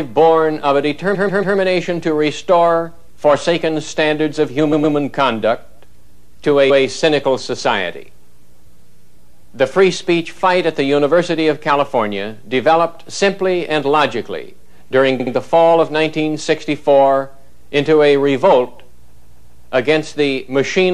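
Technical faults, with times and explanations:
1.14–1.56, 4.72–4.95, 6.69–6.83, 8.92–9.06, 15.19–15.33 and 19.11–19.67 s: repeated frames. Blocks of 70 to 139 ms replay one to four extra times, causing stutters that add about 1.6 s overall.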